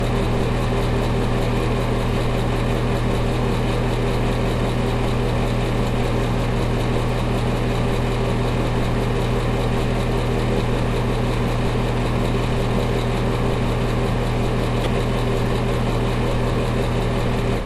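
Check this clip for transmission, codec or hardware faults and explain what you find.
One fault turns up: DAB burbling, from 14.84 to 14.86 s. Weak DAB reception let bit errors, at a rate of roughly a tenth of a percent, slip past the error correction into the MP2 audio data. The corrupted samples drop short blips of noise into individual sub-bands, and any damaged scale factors make a sub-band jump in level for up to a frame. In this everyday-sound clip that comes through as a brief burst of short noise blips, which fits errors landing in a handful of consecutive frames.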